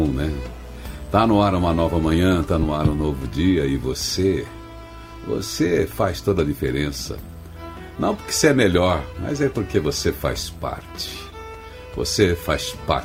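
No technical faults are audible.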